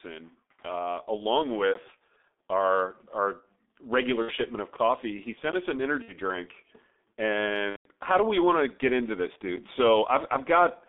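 Throughout the clip, the speech has been squeezed through the G.723.1 codec at a very low rate, consistent with its roughly 6.3 kbit/s mode, over a line passing only about 250 Hz to 3.6 kHz. The coder's coarse 30 ms frames and slow-moving voice model leave heavy damage: the speech sounds muffled and hoarse, with no air above 3.6 kHz, thin lows, and consonants smeared into one another.

Packet loss concealed by the speech codec then strikes three times. At 4.22 to 4.32 s and again at 6.02 to 6.14 s, about 60 ms of audio goes missing each time, which fits two lost 30 ms frames. The decoder bridges each gap by repeating its last pitch and filter at falling gain, so the sound briefly stretches into a buzzy tone or coloured noise that fades before the speech returns weak or distorted. The longest dropout, at 7.70 to 7.88 s, covers about 150 ms, consistent with five consecutive frames lost. Here the concealment is muted from the third lost frame onward, so the gap falls silent, and the voice stays weak or distorted for a while after packets return.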